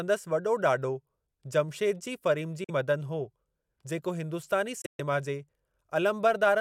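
Speech cuts to silence at 2.64–2.70 s (about 43 ms), then again at 4.82–5.01 s in broken gaps, longest 128 ms, resuming as if it had played on: likely a Bluetooth dropout from late packets.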